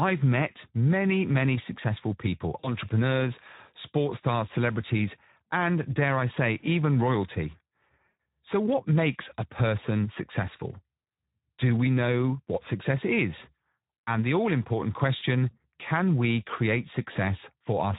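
Throughout, the Speex codec audibly roughens the speech, leaving it hoarse and noisy as the CELP excitation runs short of bits, which fits roughly 11 kbps. VoIP packet loss concealed by the speech codec occurs at 2.59–2.70 s, 8.08 s, 15.17–15.22 s and 17.13–17.17 s. In each case the decoder extrapolates its last pitch and filter into a buzzy tone or coloured noise that fades, pointing to gaps of about 40, 120, 40 and 20 ms.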